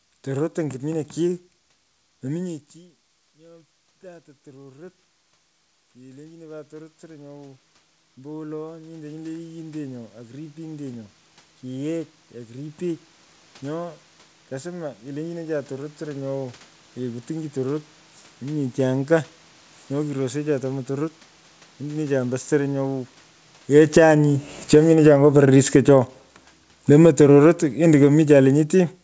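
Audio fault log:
2.44–16.29 s, automatic gain rising: the talker moved away around 2.5 s, and the input dropped about 24 dB. The gain control slowly climbed back about 23 dB over nearly 14 s, so voice and room noise swell together. The waveform envelope widens steadily, and the spectrogram brightens evenly, including the noise floor.
23.32–29.03 s, automatic gain falling: the talker came closer around 23.5 s, making the input too loud. The gain control eased down about 14 dB to the end, so the sound starts loud and then sinks along with its background. Waveform peaks start tall and taper, and the spectrogram darkens uniformly, noise floor included.
24.07–27.75 s, automatic gain rising: within that fall the gain briefly lifts again by about 4 dB over 3.7 s, heard as a mild swell of voice and room noise together. It shows as a small bulge in the waveform envelope and a slight full-band brightening on the spectrogram, all below the 8 kHz ceiling of the call path.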